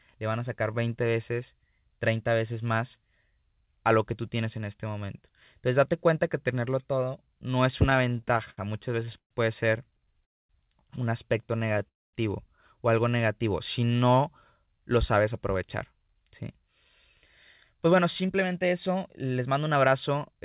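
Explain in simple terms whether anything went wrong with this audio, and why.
Repeated stalls (stutter) occur from 7.9 to 9.3 s, after "tenerlo todo no es," and again from 9.97 to 10.23 s, before "un aspecto." Late-arriving packets kept emptying the buffer, so the sound repeatedly hangs for moments of up to about 0.13 s.

A call audio freeze follows at 10.25 to 10.51 s, and another at 11.88 to 12.15 s, after "un aspecto." Each leaves roughly a quarter second of silence, likely because packets were held up in transit.

A jitter buffer speed-up runs from 14.7 s to the end. The receiver trimmed tiny slices, about 0.4 s in total, to cut delay. The speech therefore plays 6% faster at unchanged pitch.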